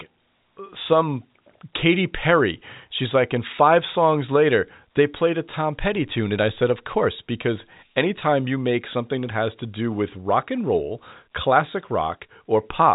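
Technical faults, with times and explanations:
No faults heard; the speech carries the usual G.711 telephone coding, with nothing above about 3.8 kHz.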